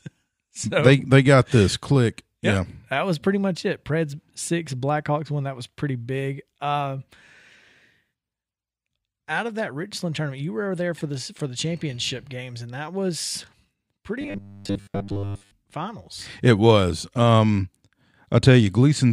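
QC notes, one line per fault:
14.21–15.54 s, robotic sound from repeated short buffers: the speech collapses into a rigid, metallic buzz fixed at 100 Hz that still roughly tracks the syllables. The likely cause is audio arriving too slowly, so playback kept looping the most recent 10 ms fragment, which is what sets the 100 Hz pitch, while the incoming material was dropped. Most of this stretch, around two thirds or more, is repetition rather than real signal.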